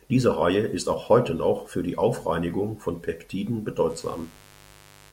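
At 3.87 s a 50 Hz mains buzz appears and runs to the end at 5.12 s. Switching spikes from the supply leak in twice per mains cycle, building harmonics up into the kilohertz range and adding a steady, raspy buzz roughly 25 dB below the speech.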